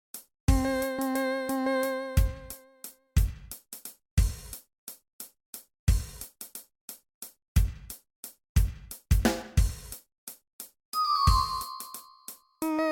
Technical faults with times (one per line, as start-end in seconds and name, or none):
none